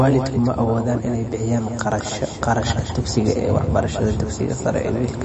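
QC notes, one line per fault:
Throughout, doubled audio track: a second copy of the speech is mixed in about 200 ms behind the first, likely because the same signal reached the mix twice, once through a slower path. The copy is full-band and roughly 10 dB quieter, with no decay or room colour, so each syllable is followed by a dry, distinct repeat instead of reverb.
Throughout, MP3 compression: the encoder was starved of bits, and the damage is plainly audible, which points to a very low bitrate such as 32 kbps. To save bits it cut everything above 8.3 kHz, so the speech loses its air and sibilant crispness. With few bits to spare, weaker frequency components flicker in and out between frames, producing a watery, swirling texture with metallic chirps on s sounds and softened, smeared consonant attacks.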